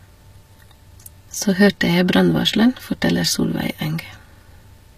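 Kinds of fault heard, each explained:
HE-AAC compression: Throughout the speech the treble sounds synthetic and grainy, with s sounds coming out gritty and metallic or lispy, and nothing at all above 15 kHz. The likely cause is HE-AAC coding at a low rate, consistent with around 24 kbps: only the lower spectrum is truly coded, and the upper bands are rebuilt by copying lower content upward under a coarse envelope, so the rebuilt harmonics fail to align with the real ones.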